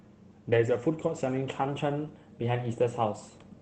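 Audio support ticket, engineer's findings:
Lost packet rebuilt from error correction, 0.51–0.53 s: one 20 ms stretch sounds rough and a bit noisy but has no gap. The Opus decoder played the low-bitrate copy carried in the next packet, so the frame survives, just coarser.

Pitch and speed jump together at 1.68 s and stay up to the end: about 5.6% faster, roughly 95 cents sharp, so nearly a semitone. Likely a drift correction step, where clock-matching logic changed the playback rate in one step to rebalance its buffer.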